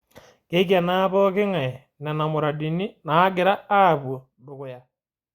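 No technical faults are audible in this recording.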